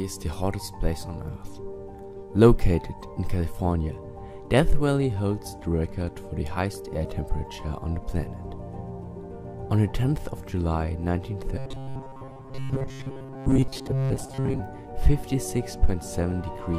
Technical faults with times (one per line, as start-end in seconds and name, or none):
11.57-14.60 robotic sound from repeated short buffers